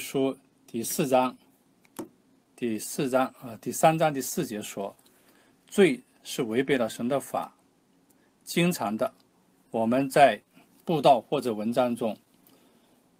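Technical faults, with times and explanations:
Throughout: clock drift between sender and receiver. The sending clock runs about 1.5% slow against the receiving one. The jitter buffer keeps draining. Small timing hiccups recur at uneven intervals across the whole clip as the receiver struggles to keep pace.
0.20–11.89 s: repeated timing corrections. The receiver repeats short pieces to avoid running empty. Playback runs at about 99% of normal speed, stretching the passage by roughly 150 ms. The edits are small and unevenly spaced, heard as slight hiccups or unsteady tempo.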